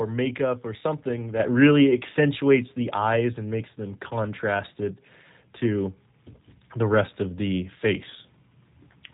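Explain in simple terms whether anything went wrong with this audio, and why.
Two things went wrong. Throughout, the speech has passed through the G.729 codec, a phone-call compressor that rebuilds the voice from a simplified model rather than storing the actual sound. Nothing above about 3.8 kHz survives, so it sounds muffled and slightly rough and robotic. Unlike simple muffling from a poor microphone, it has that synthetic, buzzy texture.

Then, at 1.40 s, just after "makeup or something", there is a sudden gain jump: the whole recording, voice and background noise alike, abruptly gets louder and stays that way to the end. Because everything jumps together in a single instant, it is likely a volume setting applied without any fade, not the speaker raising their voice.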